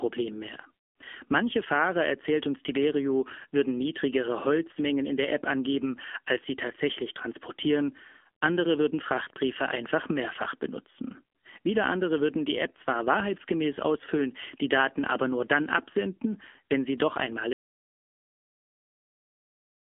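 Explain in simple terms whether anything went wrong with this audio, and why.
Two things went wrong. The whole recording has passed through the AMR narrowband mobile codec, the speech compression used on older 2G and 3G phone networks. It keeps only a narrow slice of sound, from about 250 Hz up to 3.4 kHz, so the voice loses its depth and its crisp high detail. Instead of storing the sound itself, the codec rebuilds the voice from a simplified model. That rebuilding is clearly audible here as a thin, buzzy, artificial quality throughout.

Then, at 17.53 s, there is an audio dropout to silence that lasts until the recording ends. The sound stops mid-flow and is replaced by silence, with no background hiss or room sound at all. That total emptiness means the recorder kept running while receiving nothing. The likely cause is a lost input, such as a disconnected device, a failed link or an accidental mute. 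Whatever was said after that point is gone.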